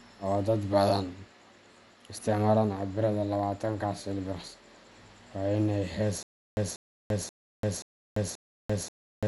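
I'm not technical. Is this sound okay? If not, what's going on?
No. The file was most likely squeezed hard with Dolby Digital compression, which discards the top of the sound and patches gaps with noise. Nothing above about 11.4 kHz survives, so the speech sounds dull, with a rough, fluttering haze around it.

From 6.23 s, right after "waa in ay hees", playback likely stalls and keeps replaying the same 0.19-second scrap, then goes fully silent for about 0.34 s. This stutter with silent gaps repeats every 0.53 s to the end, and the speech that should follow is lost.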